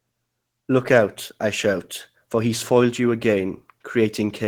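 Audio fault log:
Throughout, Opus voice compression: the speech carries plainly audible codec damage. The sound points to hybrid mode, where a SILK linear-prediction coder handles the band below 8 kHz and a CELT layer covers the top of a fullband signal. The damage fits a bitrate around 16 kbps in 20 ms frames. At that rate the excitation is coded coarsely, which leaves the speech sounding hoarse and slightly robotic.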